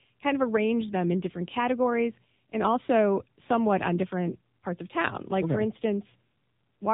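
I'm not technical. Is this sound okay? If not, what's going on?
No. The whole clip has passed through the AMR narrowband mobile codec, the speech compression used on older 2G and 3G phone calls. Everything above about 3.8 kHz is gone, so the speech sounds muffled and boxed-in, and the squeezing adds a plainly audible buzzy, synthetic edge. That edge is what separates it from a plain telephone-style filter: a filter only dulls the sound, while this codec also rebuilds the voice roughly.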